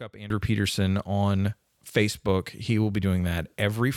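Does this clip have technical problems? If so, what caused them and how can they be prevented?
Yes. A sudden gain jump at 0.30 s raises the speech and background noise together by about 14 dB, likely from a gain setting applied without a ramp. Ramping gain changes over a few milliseconds prevents it.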